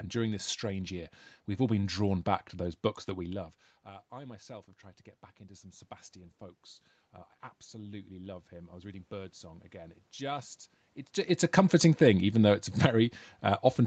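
At 7.71 s the automatic gain starts rising and keeps climbing until 10.59 s, adding about 5 dB in total. The gain control decided the input was too quiet and pushed its level up step by step, so the speech and the room noise behind it swell together over nearly three seconds. Near the end of that stretch the talker's distance to the mic also shifts, but that's just movement, not the system.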